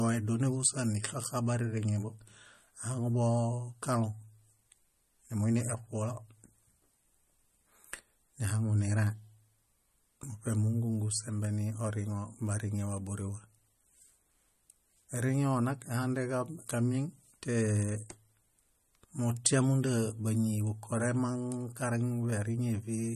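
Speech with plainly audible MP3 compression throughout: nothing above 12.6 kHz, and a watery, swirly texture on sibilants, likely from a low bitrate around 40 kbps.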